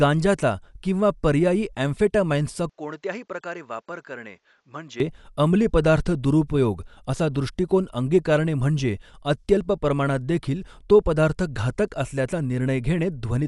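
Throughout this speech clip the sound is dull, with nothing above 11.4 kHz and rough, fluttering noise around tones, most likely from Dolby Digital compression at a low bitrate consistent with 64 kbps. From 2.70 to 5.00 s it abruptly turns narrower and quieter, cut off above 7.6 kHz, about 10 dB down, with faint new background noise, likely because the input switched to a poorer device.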